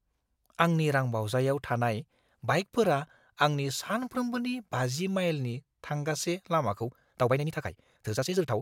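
A time-stretched section runs from 6.74 s to the end of this speech clip, where the pace jumps to about 1.58 times faster while the pitch stays put. That last stretch sounds rushed. The likely cause is software squeezing the passage to fit a shorter length, keeping the pitch by cutting out short slices of the waveform and splicing the rest together.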